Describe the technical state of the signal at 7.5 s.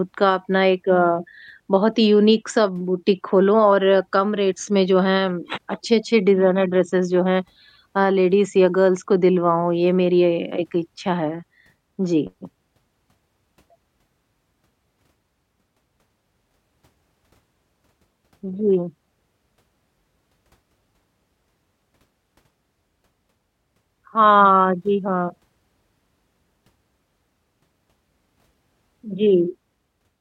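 At 7.5 s the speech signal is intact, with no technical fault audible at that moment.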